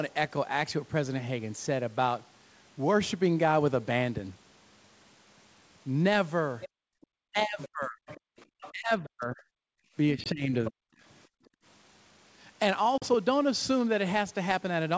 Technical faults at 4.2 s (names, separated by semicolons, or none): none